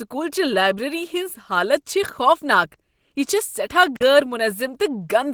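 Opus compression runs through the whole speech clip. The damage is plainly audible: the voice sounds rough, grainy and hoarse, while content still reaches about 20.3 kHz. This likely comes from Opus at a low bitrate near 16 kbps in hybrid mode, where the speech coder and band filling leave texture coarse.

An intermittent contact fault occurs from 3.95 to 4.03 s. The signal path opens for about 46 ms, cutting the sound out with crackle at each edge, as a loose plug or cable briefly loses connection before reseating.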